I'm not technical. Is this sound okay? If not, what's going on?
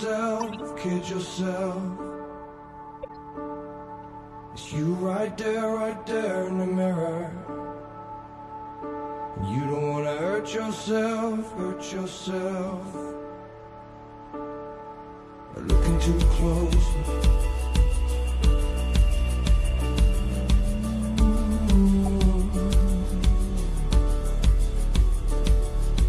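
No. A corrupt frame was decoded twice: damaged pieces of the compressed audio were played anyway, causing brief chirpy noise bursts at 0.4–0.62 s and 3.03–3.1 s.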